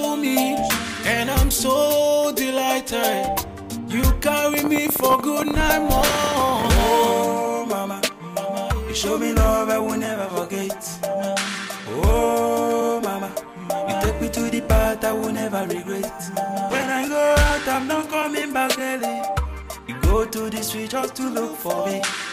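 Likely interference or a faulty connection injects a train of clicks from 4.54 to 6.63 s: around thirty unevenly spaced pops, roughly 16 per second, peaking about 15 dB above the audio.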